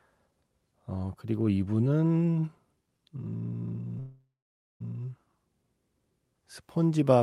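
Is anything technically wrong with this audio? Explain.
Yes. A call audio freeze runs from 3.99 to 4.82 s. The sound fades into a buzz, then silence, likely from delayed packets emptying the jitter buffer. Speech then resumes with nothing lost.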